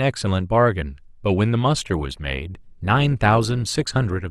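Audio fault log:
1.77–4.31 s, adaptive stream at a lower bitrate: playback switched to a leaner encoding, which fits Opus dropping from 64 to 24 kbit/s, so quality changes abruptly and codec artefacts rise, with no gap.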